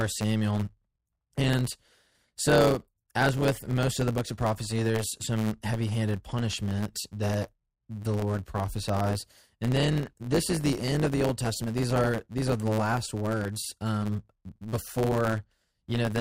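A steady buzz at about 109 Hz runs throughout the speech, which also plays 1.09 times fast: a block size mismatch (truncated), each block's end discarded.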